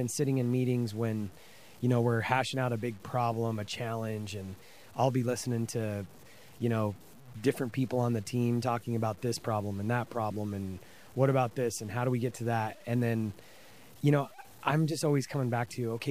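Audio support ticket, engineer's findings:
Speech, full length. Grainy, signal-following distortion on quiet passages; quiet decays and word tails turn gritty and sputter instead of fading cleanly. Error sits roughly 30 dB under the speech. Likely cause: low bit depth without dither, consistent with 8-bit truncation. No dither means quantisation error tracks the waveform as distortion, not steady hiss.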